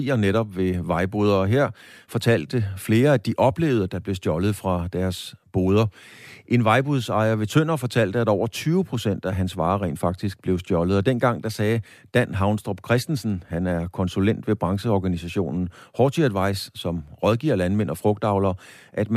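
Speech recording with no audible technical faults anywhere in the clip.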